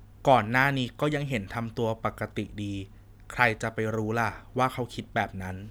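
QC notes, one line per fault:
No technical faults are audible in the speech recording; the signal holds steady with no gaps, distortion or other disruptions at any point.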